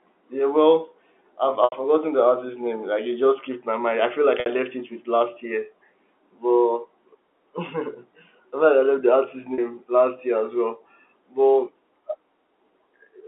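Speech over a telephone-band line, with the 300 Hz to 3.5 kHz bandwidth of G.711 coding, breaks up three times from packet loss with pitch repetition. At 1.64 s, after "yeah well I've", 80 ms is lost. At 4.40 s, after "mind I feel like", 60 ms is lost, and at 9.54 s, after "the artist's", 40 ms. The receiver fills each gap by repeating the last pitch period, so the sound briefly holds a buzzy, frozen tone. On the longest gap this tone fades toward silence before speech cross-fades back in.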